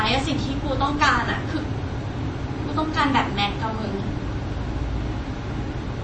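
Throughout the speech, the audio was most likely squeezed through MP3 compression at a very low bitrate, consistent with something around 32 kbps. Starved of bits, the encoder discarded the treble outright, so nothing remains above about 8.4 kHz, and it dropped weaker frequency lines that then flicker in and out between frames. The damage is plainly audible: a dull top end, a watery, swirling texture, and metallic chirps on s sounds.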